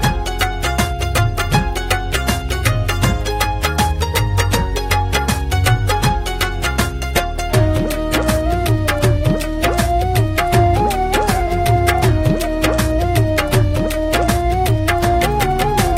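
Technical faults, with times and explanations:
No technical faults can be heard in this recording.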